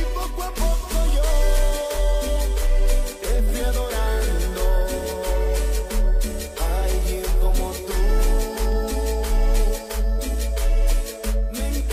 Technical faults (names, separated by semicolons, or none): none